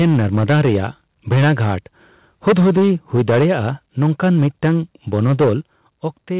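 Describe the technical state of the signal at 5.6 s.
Around 5.6 s the loudest peaks first carry a harsh, crackling edge from 5.13 to 5.5 s. This is likely microphone overload, with input about 7 dB over the converter's ceiling and roughly a sixth of samples flattened. Then, at 5.61 s, the speech and background together fall abruptly by about 7 dB, likely a microphone volume step-down made by the call software reacting to that clipping.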